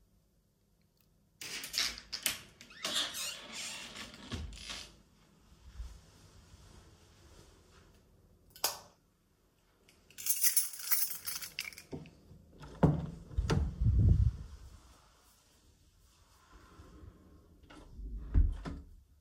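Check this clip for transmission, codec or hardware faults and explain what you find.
Nothing stood out on listening to the audio.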